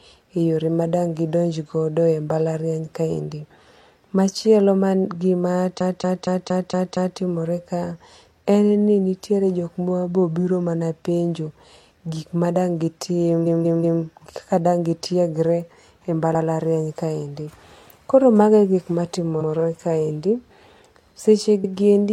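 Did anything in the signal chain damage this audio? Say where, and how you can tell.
Yes. Repeated frames from storage: compressed blocks of 0.23, 0.19 and 0.09 s replay at 5.76, 13.42, 16.30, 19.37 and 21.60 s, stuttering the speech.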